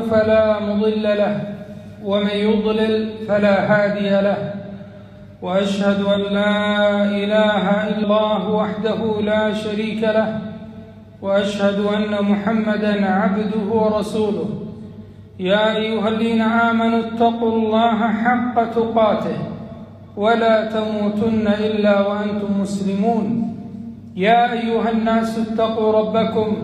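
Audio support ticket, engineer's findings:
Damaged data in a compressed stream, 7.99 to 8.05 s and 16.16 to 16.21 s: two brief glitches, about 50 ms each. Corrupt bytes in the compressed frames; the decoder misreads them, loses sync and hunts for the next valid frame header.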